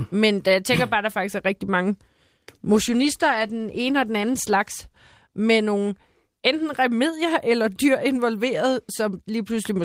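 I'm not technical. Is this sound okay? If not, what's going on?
No. From about 2.73 to 6.15 seconds the speech turns rough and muffled, worst for about 1.4 seconds, then clears just before "enten remedier eller dyr". This is a call bitrate drop: the connection weakened, so the call sent less detail.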